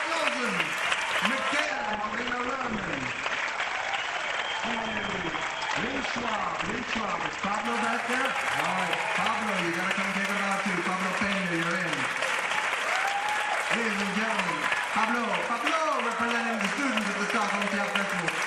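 At 1.65 s the audio switches abruptly to an adaptive stream at a lower bitrate, with no gap at the change. For six seconds, until 7.65 s, nothing is present above 8.5 kHz, so the top end sounds dull, with more audible codec artefacts. The stream has fallen back to a cheaper encoding while the connection slowed, which fits a step down from 64 to 16 kbit/s Opus. Full bandwidth returns equally suddenly at 7.65 s.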